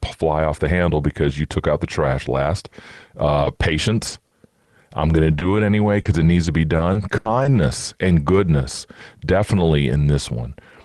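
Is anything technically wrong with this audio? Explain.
Yes. The speech has two packet-loss faults from a call path that used Opus at 32 kbps, with audio limited to about 12 kHz.

At 3.45 s there is a lost packet rebuilt from error correction. One 20 ms packet never arrived. The next packet carried a low-bitrate backup copy of it, and the decoder played that copy instead. So nothing drops out. That brief moment sounds rougher and noisier than the audio around it.

From 4.07 to 7.57 s there is repeated packet loss, which gives a robotic sound. Packets went missing nine times in this stretch. Each hole was patched by stretching the last received sound forward, about 280 ms in total. The longest single gap is 80 ms. The patches come close together, so this section sounds choppy, with small pieces of the speech missing.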